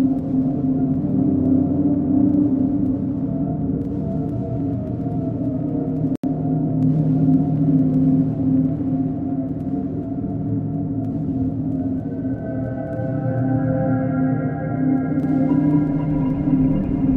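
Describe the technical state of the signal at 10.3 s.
At 10.3 s the signal is intact, with no dropout, distortion, glitch or other technical fault to be heard.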